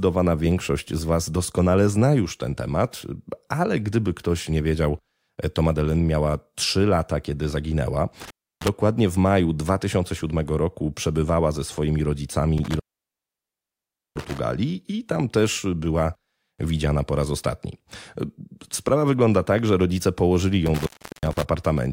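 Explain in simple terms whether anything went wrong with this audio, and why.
Intermittent contact, a loose cable or plug briefly opening, drops the speech with crackly edges: about 0.31 s at 8.21 s after "lata kiedy zaginęła", 1.36 s at 12.58 s after "roku przebywała ze swoimi", and 0.37 s at 20.66 s after "tak że rodzice położyli".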